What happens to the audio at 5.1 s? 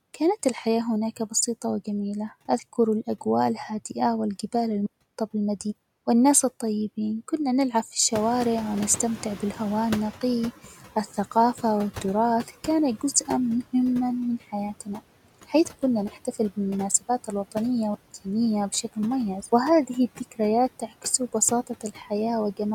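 At 5.1 s the audio is inside a digital wireless dropout that runs from 4.86 to 5.15 s, right after "أذكر الأجواء الهادئة والجبال". The link lost too much data, so the receiver muted for about 0.29 s with a very fast fade, leaving a clean hole of near silence with no noise burst on either side.

Noise suppressor artifacts also persist through this moment. The suppressor cuts what it treats as steady noise by about 17 dB, band by band and frame by frame, so the residue pumps between pauses and speech.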